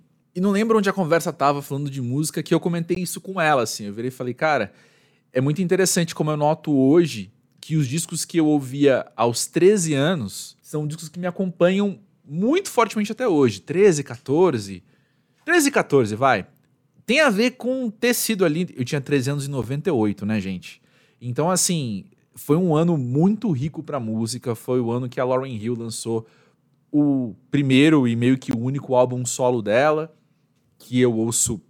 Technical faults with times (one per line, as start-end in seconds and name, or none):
2.95 gap at a join of encoded pieces
19.62 gap at a join of encoded pieces
28.51 gap at a join of encoded pieces